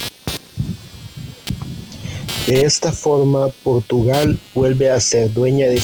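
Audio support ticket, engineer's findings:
Computer activity noise, throughout: buzzing pulses around 200 Hz, roughly 15 dB below speech, tracking machine load not the talker. Probable cause is CPU or GPU load currents modulating the shared audio ground.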